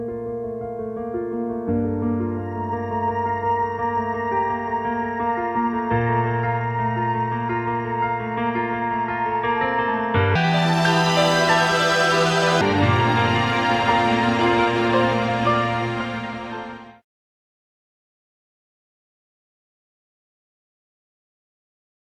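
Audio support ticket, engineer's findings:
Section at the wrong speed, 10.35 to 12.61 s: sound jumps to 1.69x, pitch up about ten semitones, hurried and squeaky, then snaps back. Likely an editor or player resampling that stretch against the wrong clock, so speed and pitch shift together.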